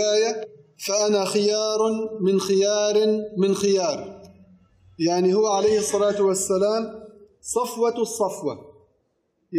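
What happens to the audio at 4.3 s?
Nothing goes wrong at 4.3 s; the audio runs through that moment intact, with no dropout, click or distortion to be heard.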